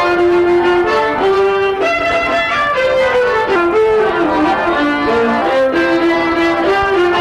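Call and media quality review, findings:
Section at the wrong speed, 3.56 to 5.42 s. Sound slows and drops about two semitones, then snaps back. Playback at 0.878x. Likely cause: segment resampled or clocked at a mismatched rate in editing or player, shifting speed and pitch together.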